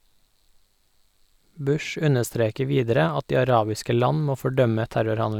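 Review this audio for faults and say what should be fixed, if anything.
Nothing here needs fixing; no faults can be heard.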